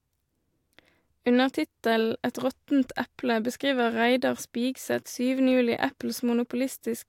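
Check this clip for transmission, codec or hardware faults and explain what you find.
Good news: I listened through the speech and found nothing to flag, with no faults worth pointing out.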